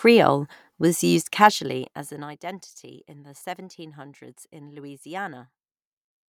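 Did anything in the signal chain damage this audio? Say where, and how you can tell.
No, nothing in this speech recording stood out on listening as damage from any stage of the signal chain.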